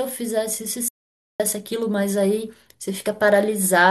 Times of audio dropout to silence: 0.88-1.40

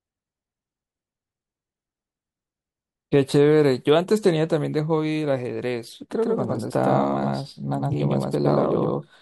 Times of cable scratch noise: none

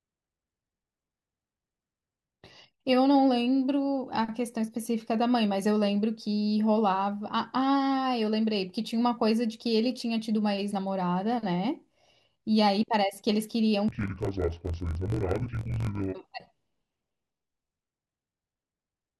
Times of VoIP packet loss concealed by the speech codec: none

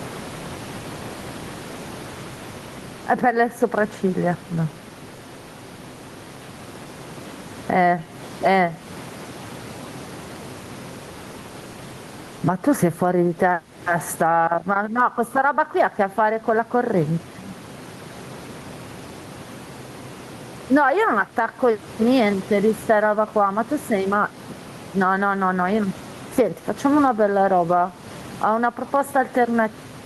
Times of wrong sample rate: none

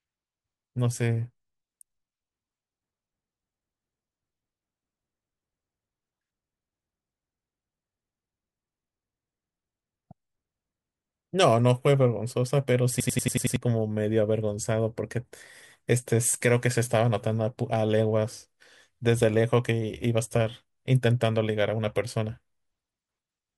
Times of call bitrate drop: none

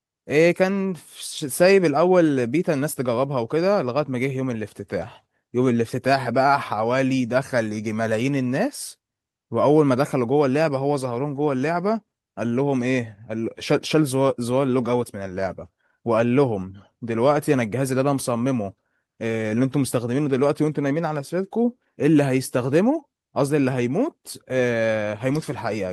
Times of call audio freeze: none

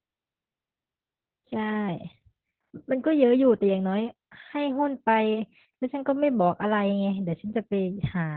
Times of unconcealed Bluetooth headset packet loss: none

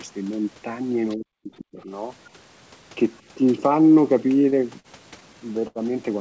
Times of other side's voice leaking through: 1.57-1.62

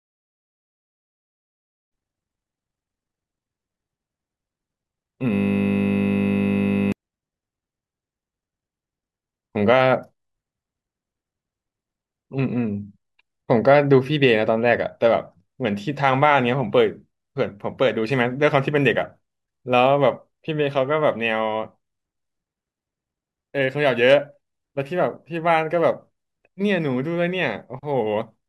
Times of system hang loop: 5.34-6.92

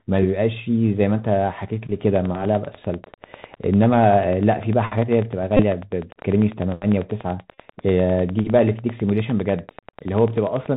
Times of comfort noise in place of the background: none

